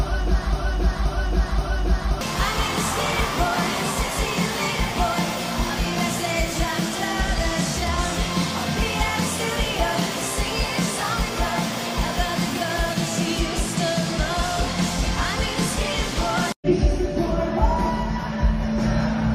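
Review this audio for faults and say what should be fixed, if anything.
A broken-record loop is already running when the audio starts and lasts until 2.21 s. A 0.53 s fragment repeats exactly, back to back, three times. The audio that belonged there is gone. The likely cause is a stalled player or stream resending its last buffered piece. To prevent it, have the playback or encoding chain detect a stalled input and output silence instead of recycling the previous buffer.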